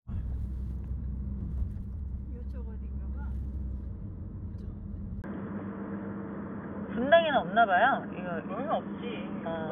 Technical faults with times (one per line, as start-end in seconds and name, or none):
5.22-9.71 input switched to a poorer device